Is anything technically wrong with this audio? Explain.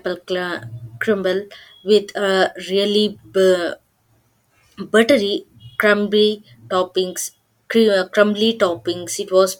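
No, no technical faults here.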